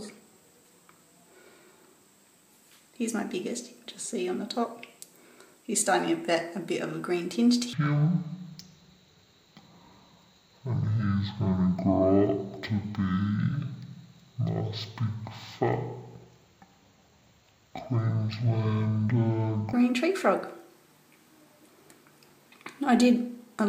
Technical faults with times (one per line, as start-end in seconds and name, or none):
7.73-19.73 stereo read as mono